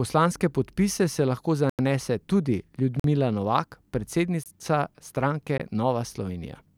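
Blocks of digital silence cut the speech at 1.70–1.79 s just after "se lahko", then 3.00–3.04 s, 4.44–4.46 s and 5.58 s. Each is a flat-line waveform gap, a vertical spectrogram stripe: likely buffers, first fitting 4096 samples, went unfilled.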